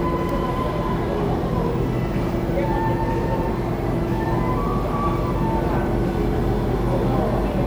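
No technical faults can be heard anywhere in this recording of sounds. Nothing drops out, clicks, distorts or changes character along the way.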